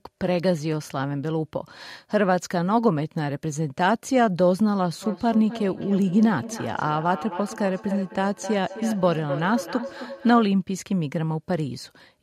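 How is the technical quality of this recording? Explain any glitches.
The recording has one clear glitch, a feedback echo between two devices from 5.02 to 10.53 s. A second device on the same call replays this speech, the original microphone picks that up, and the echo canceller doesn't remove it. Each word returns roughly a third of a second later, peaking about 12 dB below the speech.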